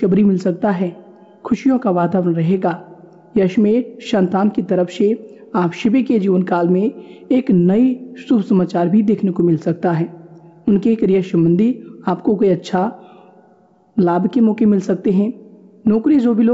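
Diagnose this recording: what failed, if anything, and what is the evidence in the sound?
Nothing failed in this recording.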